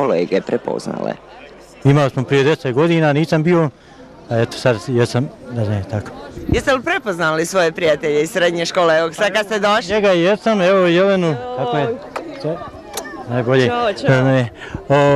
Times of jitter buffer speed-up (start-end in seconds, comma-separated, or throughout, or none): none